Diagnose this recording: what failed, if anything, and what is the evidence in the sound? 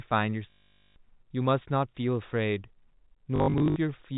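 The failure is at the network stage: packet loss with the last packet repeated. From 0.5 to 0.96 s the speech freezes into a buzzy, robotic stutter near 50 Hz, which fits 20 ms packets being replayed. From 3.36 to 3.76 s it returns as scattered short repeats, each up to 60 ms.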